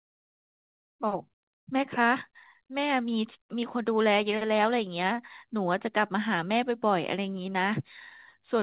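Nothing goes wrong here; the speech comes through an ordinary call path with nothing above 4 kHz, a narrowband ceiling that fits a G.711-style telephone codec doing its normal job.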